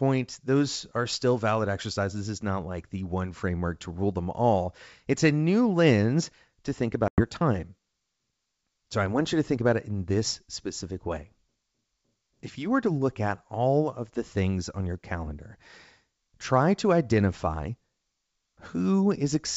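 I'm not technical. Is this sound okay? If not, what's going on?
No. Around 7.08 seconds, just after "new lens to think", the call suffers packet loss on an ADPCM call: about five chunks of audio, roughly a tenth of a second in total, never arrived. The gap is filled with silence, so the speech drops out abruptly. Because this wideband phone coding predicts each moment from the last, the receiving end loses track, and when the speech returns around 7.22 seconds it comes back slightly off, a little distorted before settling.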